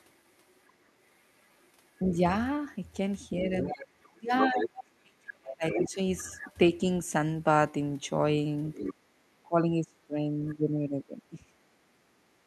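From 0.28 to 2.2 s a second voice sits far beneath the speech, around 40 dB down, most likely the other side's voice leaking through from the loudspeaker past an echo canceller that did not fully remove it. On a spectrogram it appears as a faint, separate harmonic pattern under the main talker. From 3.56 to 4.66 s and again from 5.7 to 6.53 s the leak is much stronger, nearly as loud as the speech, with two overlapping sets of harmonics. There are shorter scraps at 8.72 to 8.94 s, about 10 dB down, and at 10.48 to 10.55 s, well below the speech.

Between 3.38 and 5.98 s, and again between 9.43 and 11.58 s, the talker's own voice is speech suppressed in double talk. Each span holds roughly one and a half seconds of affected sound, with the deepest dips near 30 dB in the first and 25 dB in the second. With both sides talking at once, the canceller likely could not tell its own talker from the echo and turned both down. 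The voice sinks, thins and drops out in pieces. On the waveform the envelope pinches sharply, and on the spectrogram the upper harmonics fade or leave gaps.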